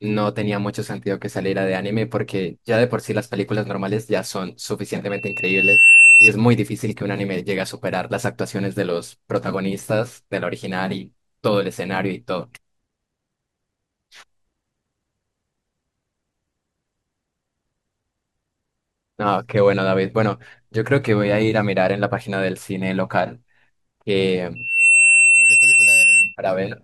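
Loudspeaker feedback squeal appears from 5.09 to 6.33 s and again from 24.55 to 26.36 s. A microphone is picking up its own loudspeaker, and at 2.7 kHz the loop gain tops unity. That tone grows out of the speech within well under a second, ending as a piercing whistle roughly 15 dB above the voice the first time and about 10 dB above it the second time, when it rises faster.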